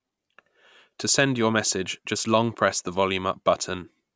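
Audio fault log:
No fault is heard in this speech clip.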